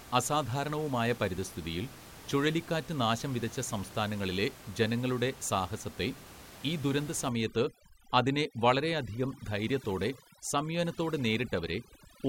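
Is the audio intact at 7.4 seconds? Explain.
No. From 7.29 s, just after "ഈ ദുരന്ത", to the end of the clip at about 12.29 s, overdone noise removal is at work. The noise reducer is cutting every frequency band that sits near its noise estimate. The room noise, about 19 dB below the speech, vanishes into near silence with twinkling specks, and the speech's quieter detail goes with it. A spectrogram shows a blank background dotted with isolated flecks and ragged holes through the harmonics.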